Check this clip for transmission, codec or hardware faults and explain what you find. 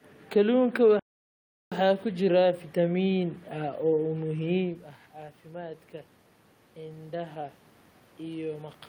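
Two faults stand out in this speech recording: a playback stall early on and a rise in automatic gain near the end.

From 0.99 s to 1.72 s the speech halts mid-flow and the output goes fully silent for about 0.72 s before resuming. This is likely a playback stall, with the player starved of data or its output thread held up. A short packet dropout would clip out a few milliseconds. This gap is long and clean, with no room noise filling it.

Between 6.74 s and 7.63 s the level climbs by about 3 dB over roughly 0.9 s. This is automatic gain rising: the input had fallen by about 14 dB, so the gain control slowly pushed its amplification back up to compensate. The voice and the background room noise swell together, which tells it apart from the talker moving around 4.5 s, where only the voice changed level against a steady background.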